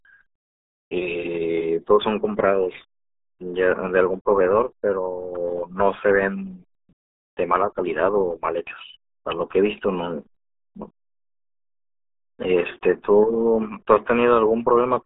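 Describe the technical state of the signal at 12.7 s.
At 12.7 s the speech carries RealAudio 14.4 codec damage, present from start to finish. The sound fits a very low-rate speech codec of about 8 kbit/s, built for dial-up modems. To fit that rate, it keeps only a narrow telephone-like band, roughly 300 Hz to 3.6 kHz. Nothing survives above 3.8 kHz. The damage is heavy. Speech sounds muffled and thin, with a gargly, bubbling texture laid over it.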